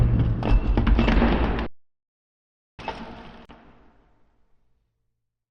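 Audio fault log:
1.66–2.79 s, playback stall: the sound halts mid-flow for about 1.1 s, likely a starved or blocked player, then resumes; the waveform shows a flat silent block, and the spectrogram a blank vertical band.
3.45 s, gap at a join of encoded pieces: a 38 ms silence from encoder delay and end padding left untrimmed; the waveform shows a brief notch with smeared edges, and the spectrogram a thin dark stripe.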